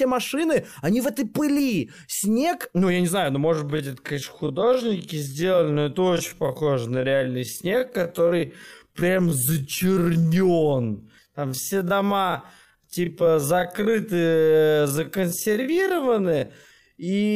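Software likely stretched the speech from 3.47 s to the end of the clip to fill a longer slot, holding the pitch steady by repeating short slices of the waveform rather than simply playing it slower. The time-stretched section runs at about 0.54 times the original pace, so delivery suddenly drags to roughly half speed while the pitch stays put.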